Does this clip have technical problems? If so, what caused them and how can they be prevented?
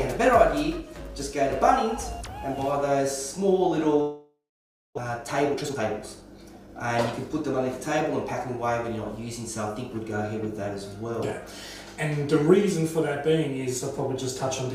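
Yes. From 4.01 to 4.99 s the sound smears into a fading buzz and then about 0.57 s of silence. Roughly 0.6 s of audio is simply gone. This is a long network dropout, likely from a network outage. Unlike brief packet-loss concealment, the filler dies away completely before the sound resumes. A more reliable connection, or redundancy and forward error correction, would help prevent it.

From 5.09 to 7.81 s the audio runs about 12% fast at unchanged pitch. This jitter buffer speed-up trims tiny pitch-period pieces to shed about a third of a second of backlog. Resampling would shift pitch; this does not. Smoother packet delivery, or gentler catch-up spread over a longer stretch, would make it far less noticeable.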